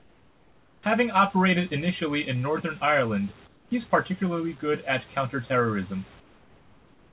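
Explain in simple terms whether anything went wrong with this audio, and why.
The call system most likely switched to comfort noise in place of the background during three pauses: from the start to 0.83 s, from 3.47 to 3.71 s just before "particularly good at", and from 6.2 s to the end. When no speech was detected, the sender stopped sending sound, and the receiver filled each gap with artificial hiss. You hear the natural room background swapped for a flat, featureless noise that is quieter.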